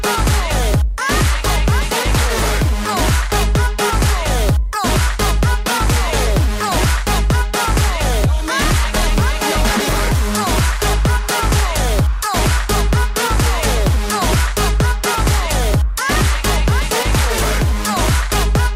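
No technical faults can be heard anywhere in the recording; the signal stays steady and intact throughout.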